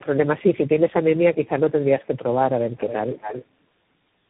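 From start to finish the speech carries tandem speech coding. It passed through about three speech codecs in a row, with the last stage sounding like CVSD, and each coder re-encoded the previous one's damage. The result is rough, muffled and warbly. Nothing reaches above 3.8 kHz, so a spectrogram shows a hard ceiling there. Below it, harmonics look smeared and grainy, and the waveform carries a fizzy, granular texture even in quiet stretches.

From 2.01 to 2.33 s there is an echo leak. A faint copy of the speech trails the original by 150 ms at about 35 dB below it, likely because a loudspeaker's sound reached the far microphone and the echo canceller let a residue through. It is barely audible, a ghost under the speech. A spectrogram shows a very weak, time-shifted duplicate of the formant pattern. A second, much stronger echo leak runs from 2.69 to 3.46 s. This copy is delayed 265 ms and sits only about 10 dB below the speech, so it is clearly heard as a doubled, slapback repeat. 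In the waveform the speech is followed by a smaller replica 265 ms later. The spectrogram shows the same shapes repeated at that offset.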